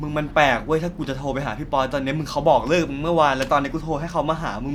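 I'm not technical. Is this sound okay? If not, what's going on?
Yes, nothing in this speech recording points to a technical problem with the signal.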